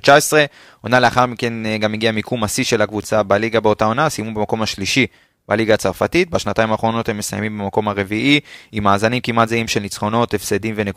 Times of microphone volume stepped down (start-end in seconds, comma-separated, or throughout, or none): none